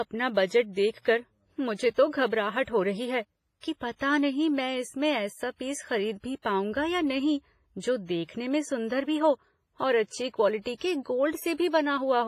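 Throughout the speech, heavy transform-codec damage is audible, likely from WMA compression at a low bitrate, with the artefacts fitting an early WMA encoder at about 24 kbps. Long transform blocks smear quantisation noise over tens of milliseconds around each syllable, giving a ringing, washy texture, and weak spectral lines are dropped. A hiss rises and falls with the signal. There is no content above 15.4 kHz.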